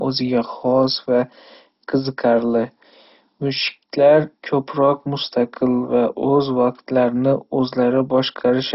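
Speech, heavily degraded throughout by what is likely MP2 compression: nothing is heard above about 5.6 kHz, upper sub-bands switch in and out, and the remaining bands carry a gurgling, granular quantisation noise, damage that fits a bitrate near 32 kbps.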